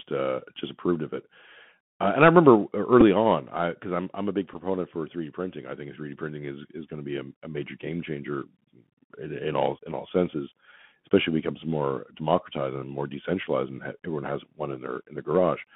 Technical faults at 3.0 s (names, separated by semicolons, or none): Bluetooth CVSD headset codec; Bluetooth headset packet repeated